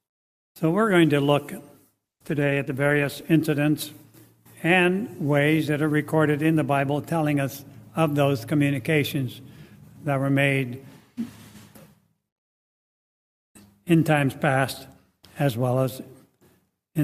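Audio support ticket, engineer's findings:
Call bitrate drop, 2.04 to 3.31 s. Sound turns coarse and muffled, high end missing, worst for about 1.2 s. Call bandwidth estimate collapsed. Sound fits a fall from around 96 kbps to near 14 kbps, with Opus coding coarsely until recovery.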